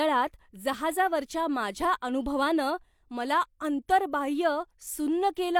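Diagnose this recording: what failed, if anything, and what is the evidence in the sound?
Nothing in the signal chain seems to have gone wrong here; the speech comes across steady and intact, with no sign of trouble at any stage.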